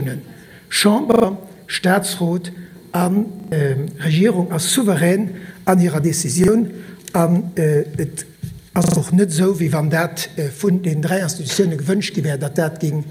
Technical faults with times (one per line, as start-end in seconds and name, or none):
1.12-1.24 repeated buffer
3.40-3.52 repeated buffer
6.44-6.48 repeated buffer
8.84-8.96 repeated buffer